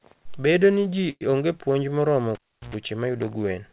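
Just after "ni ji", from 1.10 to 1.23 s, the sound stretches into a fading buzz, then about 30 ms of near silence. This is a call audio freeze, likely from packets arriving late. Speech resumes where it stopped, about 107 ms behind, with nothing lost.

At 1.31 to 1.34 s comes a brief smear. This is short concealed packet loss. About 20 ms of audio never arrived in time. The receiver covered 13 ms by extending the previous sound, then blended back in.

From 2.35 to 2.75 s the cable is pulled and plugged in. A pop opens a gap of about 346 ms. A 60 Hz mains buzz lasts about 100 ms while only the tip touches. A second pop marks the return. The call band stops at 4 kHz, which fits 64 kbps G.711 A-law.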